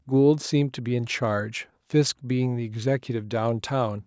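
No technical faults can be heard in this speech.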